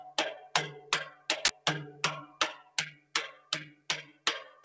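All the way through, a speech-tuned noise suppressor is working on these sounds, treating sustained parts as noise and swinging the level by around 15 dB, so things pump and thin out. It first clamps down hard from 1.1 to 1.29 s, dropping the sound by about 11 dB. Then at 1.45 to 1.49 s there's an uninitialised buffer: about 43 ms of leftover memory played as audio, which fits a 2048-sample block and comes out as a loud blast of digital noise. After that the suppressor cuts the sound again at 2.58 to 2.77 s (about 13 dB), 2.94 to 3.14 s (about 14 dB), 3.33 to 3.51 s (about 9 dB) and 3.73 to 3.89 s (about 14 dB), with held sounds sinking and decays getting chopped short. Underneath it all, the G.722 call path leaves nothing above 8 kHz.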